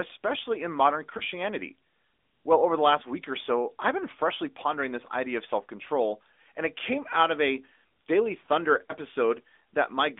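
AMR narrowband mobile codec runs throughout this speech. The audio is confined to roughly 250 Hz to 3.6 kHz, and the vocal-tract model rebuilds the voice from sparse pulses, giving a plainly audible buzzy, synthetic edge that fits a mid-rate mode near 10 kbps.

Lost AMR speech frames occur at 1.18–1.22 s and 8.86–8.92 s. Each is a single 20 ms frame that failed its checksum. The decoder filled the gap by repeating the last good pitch and filter settings at reduced gain, heard as a brief dip or warble before the voice resumes rough for a moment.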